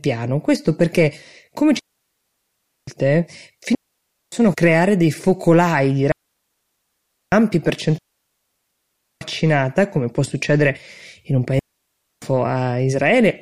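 Digital wireless dropouts occur at 1.79–2.87 s, 3.75–4.32 s (just before "creare dei focolai di"), 6.12–7.32 s, 7.98–9.21 s and 11.59–12.22 s. Each time, data loss makes the receiver mute, leaving a clean, near-silent hole of 0.58–1.23 s with no noise burst.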